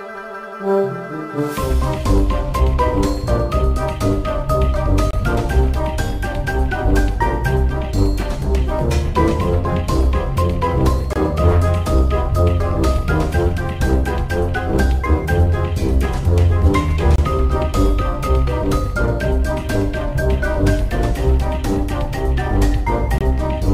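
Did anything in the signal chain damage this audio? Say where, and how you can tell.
Yes. Four short holes of silence, each about 25 ms long, cut into the sound at 5.11, 11.13, 17.16 and 23.18 s, 6.025 s apart. This is a gap between chunks, introduced at the storage or playback stage. The audio was handled in 6-second blocks, and something in the chain inserted a brief stretch of silence at each join, perhaps codec padding or a player starting each block late. No material is lost, but the flow breaks at every boundary.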